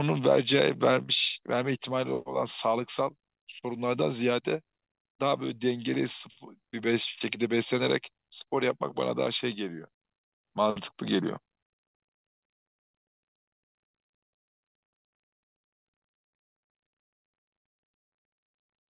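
No technical faults occur at any point in this speech, so there is nothing to describe in time order.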